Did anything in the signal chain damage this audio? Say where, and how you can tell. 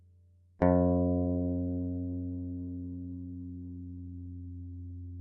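Yes. The damage happens at the network and codec stage: an adaptive stream switching to a lower bitrate. At 1.17 s codec artefacts suddenly rise and turn swirly, and it stays degraded to the end. There is no gap or dropout at the switch. On a spectrogram the upper band cuts off abruptly at that moment and fills with smeared, patchy energy. The waveform stays continuous. The sound points to an Opus stream dropping from about 64 to 12 kbit/s as the connection slowed.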